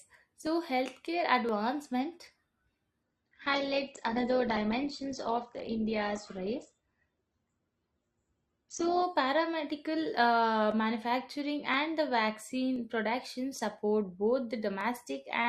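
From 0.47 s to 14.81 s, periodic USB or driver dropouts skip a tiny slice of audio, under a millisecond, every 1.02 s, giving evenly spaced ticks rather than random clicks. From 3.03 s to 9.03 s, the adaptive stream switches abruptly, with no gap, to a lower bitrate. Treble vanishes above 8.4 kHz and the speech turns smeary, which fits Opus falling from 64 to 12 kbit/s.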